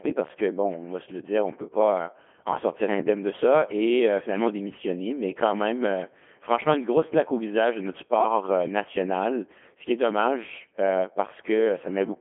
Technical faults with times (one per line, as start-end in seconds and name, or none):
0.00-12.20 Codec 2 vocoder